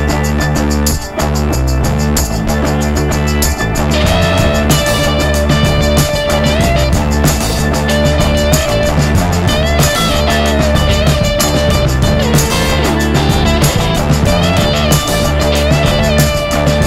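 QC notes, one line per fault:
8.68 s, repeated buffer: new audio missed its deadline, so the device replayed its last buffer twice more. Each piece lasts about 1.45 ms, which fits a 64-sample buffer, so the hard joins merge into one brief click or buzz, and a few milliseconds of sound are lost.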